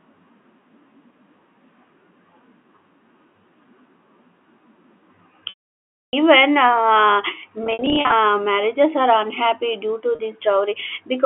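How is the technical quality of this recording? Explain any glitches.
The speech has three dropouts from packet loss with pitch repetition, over a narrow telephone band from G.711 coding. At 5.49 to 6.13 s, 640 ms is lost. The repeated pitch period fades into silence. From 7.64 to 8.12 s, scattered gaps of up to 60 ms sound buzzy before "marriages are". At 10.15 s, after "due to", a 40 ms gap briefly holds the note.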